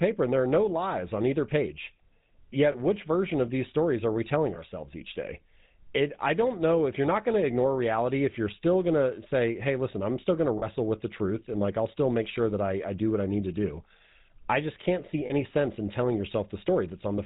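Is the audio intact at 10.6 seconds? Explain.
No. From 10.58 to 10.65 s there are lost GSM frames, a gap of about 40 ms, which fits two 20 ms frames going missing. The decoder had nothing to play for that stretch, so it reused the settings of the last good frame and repeated them. You hear that as a brief rough, metallic ring smeared over the sound instead of a clean continuation, a little buzzy hiccup right at that spot.

That moment also carries the GSM full-rate codec damage that runs through the whole clip. The codec models the vocal tract and drives it with a sparse, regularly spaced pulse excitation at 13 kbps. It cuts everything above 4 kHz, so the speech sounds dull and band-limited, and the thin excitation gives it a plainly audible buzzy, gravelly roughness. That roughness is under the frame-loss ring at 10.6 s too.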